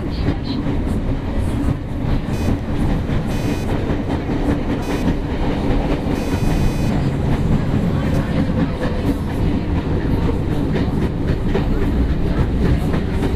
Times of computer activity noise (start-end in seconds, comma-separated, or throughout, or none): 2.33-8.33